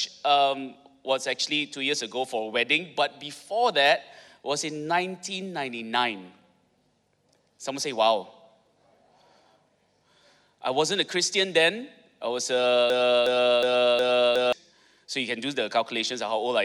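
Most likely the player or stream stalled at 12.9 s and kept resending the last fragment it held, producing a broken-record loop: a 0.36 s slice of the audio repeats four times back to back until 14.53 s, and whatever should have played then is missing.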